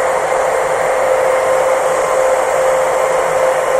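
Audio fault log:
2.92 s, compressed frames skipped: the sound jumps ahead by roughly a tenth of a second. A handful of compressed frames, about four, were missing or rejected as damaged by the decoder.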